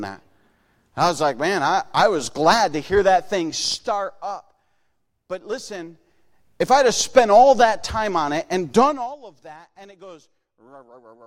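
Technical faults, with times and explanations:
No technical faults detected.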